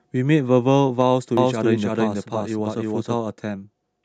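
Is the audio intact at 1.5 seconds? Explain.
No. A doubled audio track runs from 1.37 to 3.15 s. A second full-band copy of the speech trails roughly 0.3 s behind, at about equal loudness. It has no room decay and cuts in abruptly. Likely cause: a slower second capture path.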